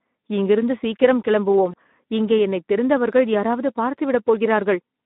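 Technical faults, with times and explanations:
Throughout: Speex codec. The speech has that hoarse, grainy CELP quality you get when the excitation is starved of bits, which fits a setting around 11 kbps. The band is squeezed to roughly 200 Hz to 3.7 kHz, so it sounds thin and telephone-like.
1.71–1.74 s: VoIP packet loss concealed by the speech codec. Right after "இங்கிருந்து சீக்கிரம்" there's a brief smear where the decoder reused its last pitch and filter to cover the gap, which fits a single lost 20 ms frame. The voice stays weak or distorted for a moment going into "இங்கே என்னைத் தெரிந்தவர்கள் யாராவது".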